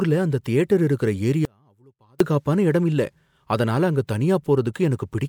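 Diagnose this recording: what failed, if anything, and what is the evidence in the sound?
The speech has an audio dropout to a faint residue from 1.45 to 2.20 s. For about 0.75 s the signal collapses abruptly to a leak roughly 35 dB down, then snaps back. That's likely an intermittent connection in the analogue wiring, with some signal bleeding across the break.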